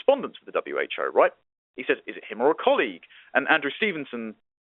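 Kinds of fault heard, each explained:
No faults turn up in this one; the speech simply carries the narrow band you'd expect from ordinary G.711 telephone coding, which is just how a phone line sounds.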